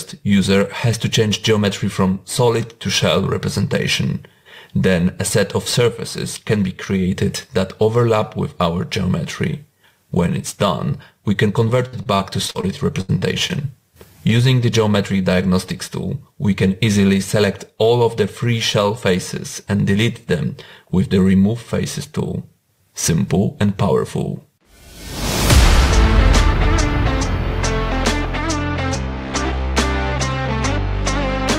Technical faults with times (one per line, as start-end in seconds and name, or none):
11.87-12.65 repeated packet loss (robotic sound)
13.01-13.11 burst of packet loss
13.19-13.52 short concealed packet loss